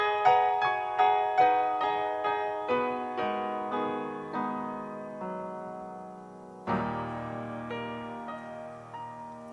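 No technical fault can be heard anywhere in the audio, with the signal holding steady in level, continuity and timing throughout.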